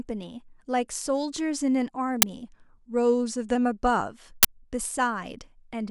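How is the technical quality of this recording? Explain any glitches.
The speech recording has two kinds of playback glitch: two brief digital noise bursts and one stretch where the speed and pitch sag.

An uninitialised buffer was played twice, once at 2.22 s and again from 4.43 to 4.45 s. Each time, a block of memory was sent out before any audio had been written into it, so leftover data was read as samples. The result is a short, harsh burst of noise lasting 10 ms and then 20 ms.

From 2.45 to 3.55 s the playback rate drops by about 5.3%, then snaps back. The likely cause is a drift correction step, where clock-matching software lowered the rate in a single jump to manage its buffer. Speed and pitch fall together, with the pitch down about 94 cents, close to a semitone.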